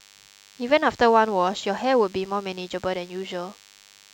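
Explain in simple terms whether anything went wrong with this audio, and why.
DECT cordless phone buzz runs through the whole recording: a nearby cordless phone sends radio pulses 100 times a second, which the audio circuitry turns into a thin, steady buzz under the speech.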